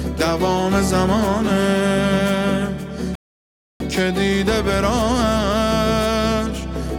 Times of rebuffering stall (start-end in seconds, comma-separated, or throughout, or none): 3.15-3.80